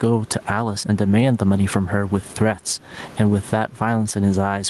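Speech, with gain pumping throughout. The level breathes, with a gain swing of around 15 dB. Loud and soft parts sit close together, and the speech sounds squashed. The likely cause is gain set far too high for the microphone, with a fast limiter or compressor pulling it down on each peak. The room noise sits about 32 dB below the speech. The call-codec sound and the top end ending at 12 kHz fit an Opus call path at around 32 kbps.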